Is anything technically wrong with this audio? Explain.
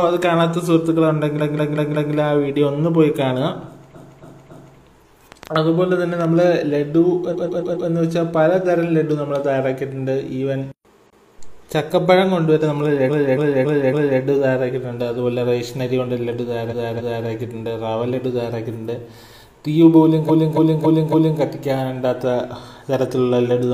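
Yes. The clip has two kinds of fault.

Repeated frames occur seven times: 1.35 to 2.09 s, 3.90 to 4.74 s, 7.29 to 7.85 s, 11.06 to 11.34 s, 13.05 to 14.17 s, 16.68 to 17.23 s and 20.25 to 21.37 s. Each time, a short block of compressed audio is decoded again. The blocks are 139.3 ms, 185.8 ms or 278.6 ms long, each fitting a handful of codec frames. A block is replayed one to four extra times, so the same fragment stutters back. This adds up to 1.1 s per event. A click train only adds pulses on top of the sound. Here the sound itself loops.

A train of clicks runs from 5.32 to 6.43 s. It is roughly seven similar pops at about 5.5 per second, spaced unevenly, and peaking a few decibels above the surrounding sound. The sound underneath carries on without repeating, which separates this from the frame stutter. The pulses tick over whatever is playing. They likely come from electrical interference or a faulty connection or power supply.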